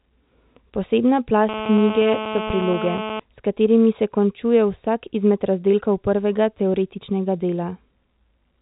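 From 1.49 to 3.20 s, a GSM phone buzz sits over the speech. It is a hard, raspy tone at about 217 Hz, thick with harmonics. It is loud, only about 8 dB below the speech. It holds steady for that stretch, as it would from a phone on a call. The phone sends radio bursts at that rate, and the audio circuit rectifies them into sound. The buzz does not follow the speech. The telephone band, capped near 3.8 kHz, carries it too.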